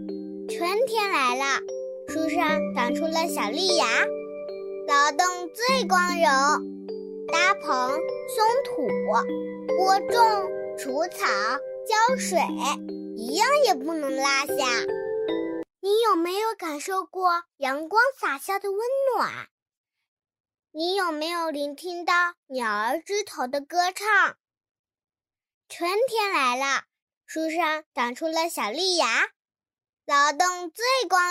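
No technical faults are audible.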